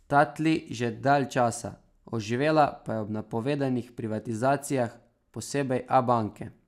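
No technical faults are audible.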